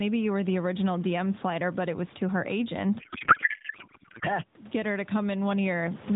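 Speech carried over AMR-NB at a 12.2 kbps rate shows two faults. Gain pumping runs throughout: the input gain is likely set far too high, so a fast limiter or compressor drags the level down on each loud sound, by around 20 dB. Loud and soft parts end up closer in level, leaving the speech squashed. From 3.0 to 4.25 s there is a codec payload misread: the receiver takes octet-aligned AMR frames as bandwidth-efficient ones, so the decoder reads fields from the wrong bit positions. For that stretch the speech is replaced by garbled noise and warble that barely tracks it, ending when the framing is read correctly again.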